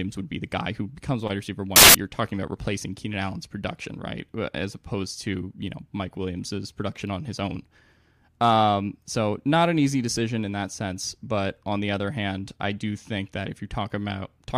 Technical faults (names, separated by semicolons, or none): samples built from the wrong bytes